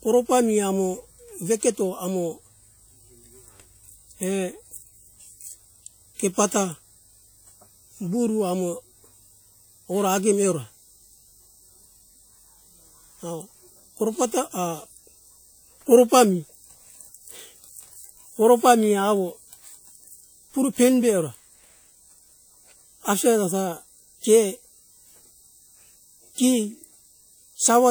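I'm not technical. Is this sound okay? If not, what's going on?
No. From start to finish the speech carries the leftover flaws of a small, heavily squeezed audio file, even though the file itself is saved at high quality. This is low-bitrate audio saved at a high bitrate. It was most likely first compressed hard into a small file, which threw away detail for good, and then saved again at a generous setting. That second save makes the file bigger but cannot bring the lost detail back.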